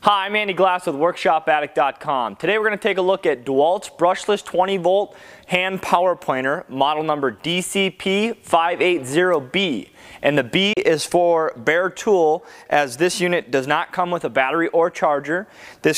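At 10.73 s the audio drops out abruptly, falling to silence within about 3 ms and staying silent until 10.77 s before picking up again further along, with the missing stretch simply gone. That brief hole is a digital broadcast dropout. The receiver lost the signal or rejected a corrupted frame and muted its output until valid data returned. The roughly 32 ms of lost material fits a single discarded frame.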